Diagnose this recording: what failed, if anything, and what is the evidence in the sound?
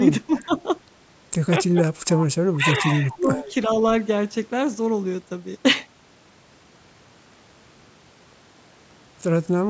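Speech suppressed in double talk occurs at 0.27–0.52 s and 2.57–3.44 s. The level dips by about 15 dB in the first stretch and about 10 dB in the second. The stage is call processing. The echo canceller likely mistook this talker for loudspeaker echo and turned it down.

An echo leak overlaps those stretches, at 0.35–0.45 s and 3.09–3.53 s. A delayed copy of one voice returns 417 ms late. It sits about 20 dB, then about 15 dB, below the speech. The cause is likely a loudspeaker-side echo canceller that let part of its microphone pickup through.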